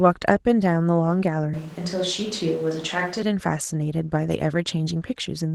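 Throughout the clip, Opus voice compression is working at a low rate: the coarse, hoarse texture points to about 16 kbps in hybrid mode, with linear-prediction coding below 8 kHz and a thin transform layer above it. The speech sounds slightly muffled, hoarse and robotic.

From 1.54 s to 3.22 s the close microphone's signal most likely dropped out and a switch to a distant microphone took over. The speech abruptly turns roomy and hollow, loses bass, falls roughly 5 dB, and room noise rises to around 20 dB below it.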